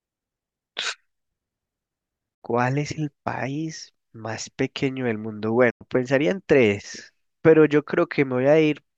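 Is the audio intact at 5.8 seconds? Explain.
No. From 5.70 to 5.82 s the speech quickly fades to silence, a digital broadcast dropout: the receiver lost frames and muted, so that sound is gone.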